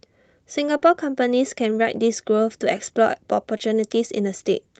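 Short concealed packet loss at 0.77 to 0.83 s and 3.57 to 3.61 s in this speech clip: about 40 ms and then 20 ms of audio arrived too late, and the receiver smeared over each gap by extending the preceding sound.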